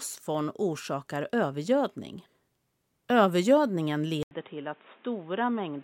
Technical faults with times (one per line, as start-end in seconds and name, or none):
4.23-5.83 input switched to a poorer device